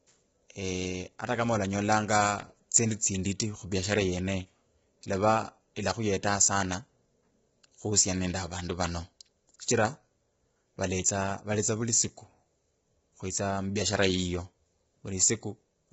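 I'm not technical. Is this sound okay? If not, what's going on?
No. The speech was most likely squeezed through low-delay AAC compression, the kind video-call apps use to keep lag short. It chops the sound into very short slices and saves as little as possible about each one, and here it was pushed hard. Throughout the clip the voice sounds rough and grainy, with a hiss filling the gaps between its tones, and everything above 7.7 kHz is missing, leaving it dull.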